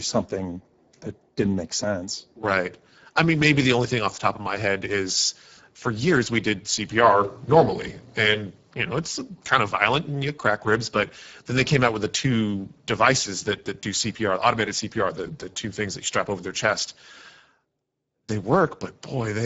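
Throughout, the speech carries plainly audible Speex codec damage, hoarse and noisy, consistent with roughly 10 kbps; a spectrogram shows a hard ceiling at 7.7 kHz.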